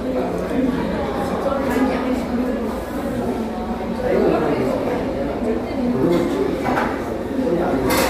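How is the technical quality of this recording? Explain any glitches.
There is one glitch. At 6.02 s, damaged data in the compressed stream makes the decoder lose sync and hunt for the next frame, producing a brief glitch.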